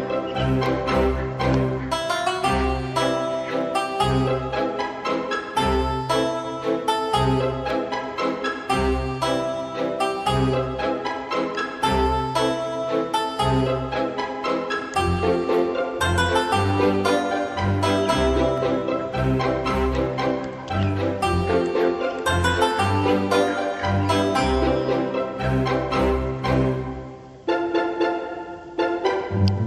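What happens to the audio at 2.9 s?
Nothing goes wrong at 2.9 s; the audio runs through that moment intact, with no dropout, click, glitch or other fault.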